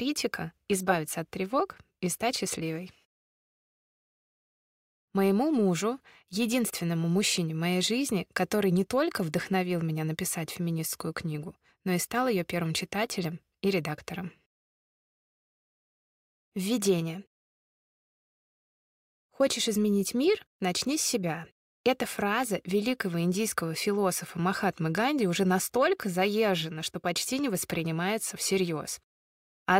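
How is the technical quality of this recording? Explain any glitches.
The technical quality of this recording is sound, with no glitches to explain.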